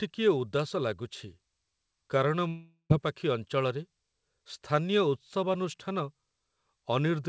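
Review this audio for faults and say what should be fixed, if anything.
From 2.48 to 2.92 s the speech breaks off in what is likely a long network dropout. About 0.42 s of audio never arrived, and the receiver stretched the last sound into a fading buzz before roughly 0.1 s of near silence, after which the speech resumes with that stretch missing. On a spectrogram this appears as smeared, decaying harmonics followed by an empty gap, and the waveform tapers to nearly flat. Forward error correction and a more stable network link would help prevent such gaps. The call band stops at 8 kHz, which fits a wideband codec such as G.722.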